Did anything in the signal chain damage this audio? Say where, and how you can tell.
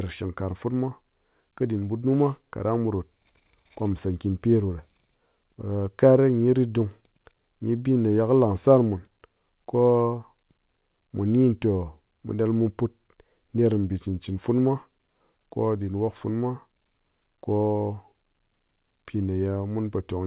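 No, nothing in the chain damaged this speech; it came through a call path whose band stops at 4 kHz, which fits narrowband G.711 A-law coding, and nothing beyond that narrowband character shows up.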